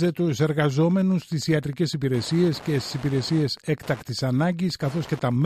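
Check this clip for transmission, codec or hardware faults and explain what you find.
One hardware fault is present: Wi-Fi interference, running from start to finish. A nearby Wi-Fi radio's beacon, repeating every 102.4 ms, is picked up and rectified by the audio circuit, producing a steady ticking just under ten times a second, roughly 25 dB below the wanted sound.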